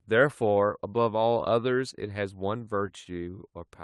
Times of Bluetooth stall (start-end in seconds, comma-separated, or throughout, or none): none